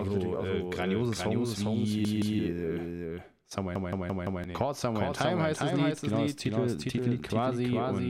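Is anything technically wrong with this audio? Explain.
Yes. The speech carries two faults: a doubled audio track throughout and two repeated-buffer stutters.

Doubled audio track, whole clip: a second, full-band copy of the speech runs roughly 0.4 s behind the original and about 5 dB quieter. It has no reverberant tail or room colouring, so it sounds like a detached, slightly weaker echo rather than an acoustic reflection. The likely cause is the same signal being captured again through a slower path and mixed back in.

Repeated buffer, 2.05 to 2.39 s and 3.76 to 4.44 s: new audio failed to arrive in time, so the device replayed the last 170.67 ms chunk instead, which fits an 8192-sample buffer. The chunk repeats with hard joins at each loop. At 2.05 s it plays two extra times, a clear stutter that drops about a third of a second of speech. At 3.76 s it plays four extra times, a longer stutter that loses roughly 0.7 s.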